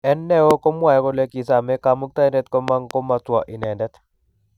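Loud pops break through the speech three times. The first, at 0.51 to 0.53 s, is a single sharp transient standing well above the speech level. Between 2.68 and 2.93 s, two pops arrive in quick succession. A third, softer single pop falls at 3.63 to 3.66 s. The speech carries on beneath each one, consistent with a voltage pulse added to the signal, likely from a connector, switch or static discharge.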